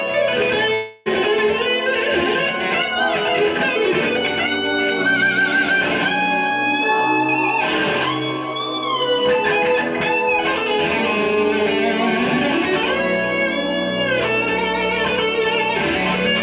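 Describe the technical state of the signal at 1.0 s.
A long network dropout runs from 0.74 to 1.08 s, so at 1.0 s the signal is not real audio but filler. A stall in arrival is the likely cause. The receiver keeps extending the last sound it had, and across the whole gap of about 0.32 s that synthetic continuation plays as a fading buzz or hiss rather than dropping to silence. The sound then resumes without the lost stretch, still band-limited to 4 kHz by the G.711 call codec.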